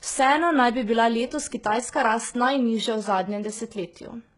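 Throughout, the speech shows heavy damage, with nothing above 11 kHz and treble that sounds rebuilt rather than simply cut, likely HE-AAC compression at a bitrate near 12 kbps.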